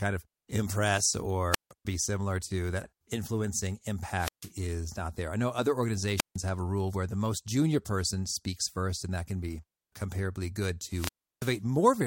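A speech clip with four wireless microphone squelch dropouts: 1.51–1.72 s, between "of impress" and "be similar to"; 4.16–4.52 s; 6.16–6.37 s, after "there I know other"; and 10.87–11.60 s, after "can be comparably good". The FM link fades, hiss swells, and the receiver's squelch mutes the output for about 0.16, 0.15, 0.15 and 0.33 s. The hiss rise before each hole distinguishes it from a clean digital packet dropout.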